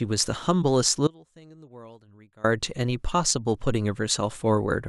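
At 1.07 s the speech cuts out abruptly and stays gone until 2.44 s, about 1.37 s, leaving only a faint trace of the signal roughly 25 dB below its normal level. This audio dropout to a faint residue likely comes from losing the wanted feed while the path stayed live.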